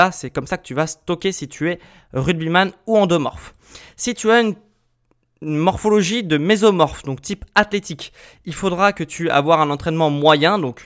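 No technical faults can be heard anywhere in this speech recording. Nothing in the audio points to a problem with how it was captured, carried or played back.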